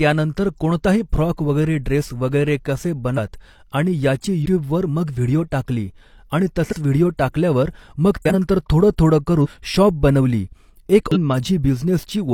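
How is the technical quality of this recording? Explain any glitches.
The speech in this recording is interrupted six times by compressed frames skipped. The jumps come at 3.14, 4.42, 6.68, 8.17, 9.41 and 11.12 s. The one at 4.42 s falls between "आणि याची" and "मग व्हिडिओ टाकली आणि". The one at 8.17 s follows "व्हिडिओ टाकल्यावर मग". Whole blocks of coded audio never reached playback, so the speech leaps ahead by roughly a tenth to a third of a second.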